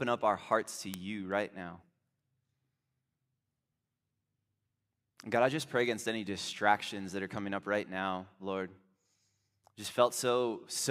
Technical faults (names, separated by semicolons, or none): word clock ticks